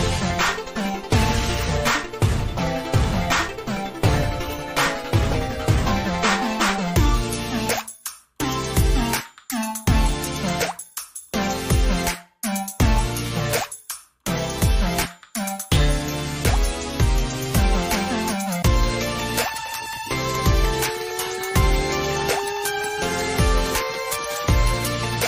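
The clip has one short fault: an overlap between stream segments at 2.39 s. It sounds like a small click or a tiny skip. The stream is split into segments about 6 s long, and two of them claim the same stretch of time. The player trims the overlapping part away, though that sound was never actually repeated. A few milliseconds are lost, so the waveform jumps abruptly at that point. It happens only once here.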